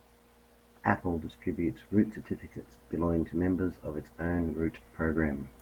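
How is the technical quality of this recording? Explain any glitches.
The quality is poor throughout, due to one fault. Across the whole speech clip, the signal was likely reduced to low bit depth without dither, rounded to a coarse grid consistent with about 9 bits. The error tracks the speech, sitting roughly 35 dB below it, so quieter passages turn gritty and grainy, with the distortion shifting as the sound changes.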